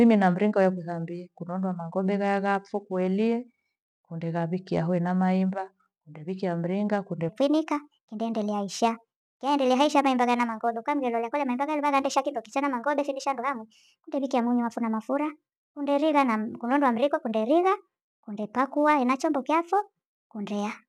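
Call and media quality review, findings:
Section at the wrong speed, 7.29 s to end, after "maemba urewikia mringa kunde": playback 1.32x fast, pitch up about five semitones. Likely clock or sample-rate mismatch in editor or player. Pitch and tempo rise together, unlike time-stretch or pitch-shift alone.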